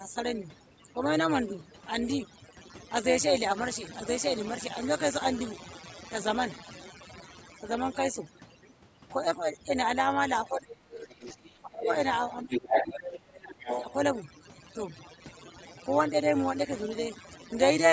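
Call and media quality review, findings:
Overdone noise removal, whole clip: background pulled to near silence with twinkling specks between phrases; quiet tails of speech thinned out. Denoiser set too aggressive, gating individual frequency bands that sit near its noise estimate and taking low-level speech energy with them. Band limit at 8 kHz from the call microphone chain is expected and separate.

Overlap-add ripple, whole clip: metallic buzz with extra tones around each note riding on the speech, level swinging about 11 dB at around 150 Hz. Frame resynthesis stage: windowed frames overlapped with a spacing that doesn't sum to constant gain, so level pulses once per frame.

Speech suppressed in double talk, 10.48–10.82 s, 11.57–11.88 s: near-end speech ducks sharply, roughly 25 dB at deepest. 12.43–13.67 s: longer, shallower dip around 15 dB. Likely echo canceller misreading simultaneous talk as echo and attenuating both.

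Other side's voice leaking through, 10.91–11.5 s, 11.84–11.96 s, 13.04–13.19 s, 13.59–13.93 s: second voice under the talker, from well below to near level. 12.5–12.84 s: louder than the talker. Likely residual loudspeaker echo the canceller failed to remove from the microphone.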